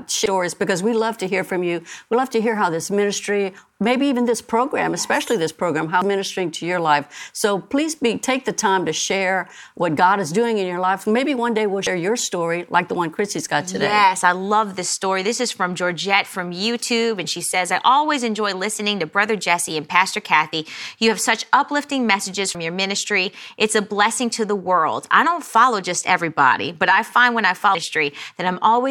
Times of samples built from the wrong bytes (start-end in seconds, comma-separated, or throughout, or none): none